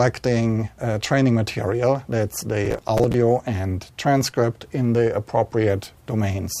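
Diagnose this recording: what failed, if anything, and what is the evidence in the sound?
Processor overload crackle from 2.65 to 3.14 s: a gritty tearing burst at the driver and buffer stage. The processor missed a run of deadlines on short buffers of a few milliseconds, around fifteen of them, each time repeating stale audio with hard edges, so the clicks fuse into crackle.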